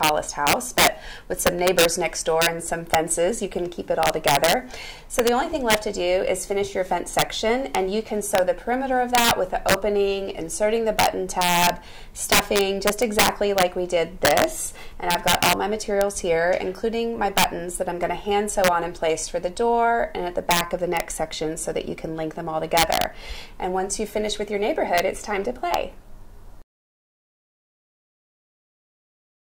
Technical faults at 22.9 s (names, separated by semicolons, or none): integer overflow